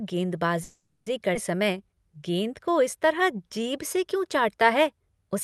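A call audio freeze runs from 0.63 to 1.08 s in this speech recording. For about 0.43 s the last sound is stretched into a fading buzz or hiss that ends in a very brief silence, and then the speech picks up exactly where it stopped with nothing lost, most likely because packets stalled in transit and the jitter buffer ran dry. A skip ahead follows at 1.34 to 1.37 s: roughly a fifth of a second of speech is dropped and the two sides are butted together with almost no gap. A jitter buffer slow-down then stretches 1.58 to 3.97 s. The speech plays at about 93% speed with the pitch unchanged, adding around 171 ms as single pitch periods and pause fragments are repeated to rebuild the buffer's reserve. Throughout, the Opus call path's coding rolls off the top end above 12 kHz.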